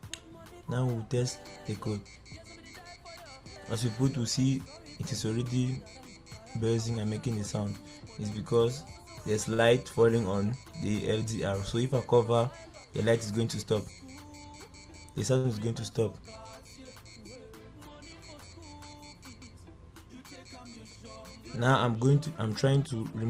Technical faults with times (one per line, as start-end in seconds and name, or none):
9.53-9.61 short stall from a late packet
13.31-13.85 jitter buffer speed-up
15.38-15.46 short stall from a late packet
19.41 CD skip
22.69-23.20 jitter buffer speed-up